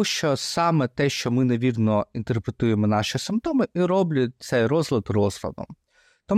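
No technical faults can be heard anywhere in the speech.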